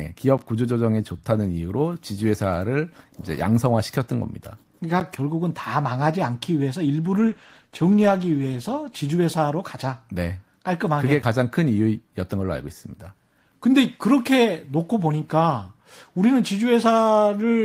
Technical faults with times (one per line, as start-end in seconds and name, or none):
0.38 block of digital silence
5.00 block of digital silence
7.19-9.43 call bitrate drop
11.22 block of digital silence